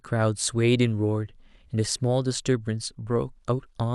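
No technical faults are audible anywhere in the speech recording.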